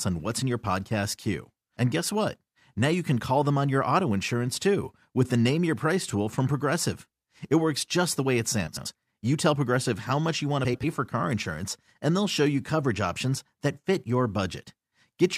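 A speech clip with two brief bursts of frames out of order. The first runs from 8.67 to 8.87 s, just after "just the way it". The second runs from 10.64 to 10.84 s, just before "for car insurance and". In each, two adjacent blocks of about 93 ms play in swapped order. That points to runs of four frames. The result is a garbled flutter. No time is lost.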